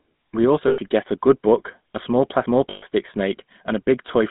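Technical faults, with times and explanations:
Throughout: GSM full-rate codec. The speech has a buzzy, gravelly roughness and a narrow line band of 150 Hz to 3.7 kHz. The codec models the vocal tract and excites it with sparse regular pulses, which fits the 13 kbps full-rate scheme.
0.68–0.79 s and 2.70–2.83 s: lost GSM frames. Each gap of roughly 100 and 120 ms becomes a rough, metallic ring. The decoder repeats the last good frame's settings, which fits five and six missing 20 ms frames.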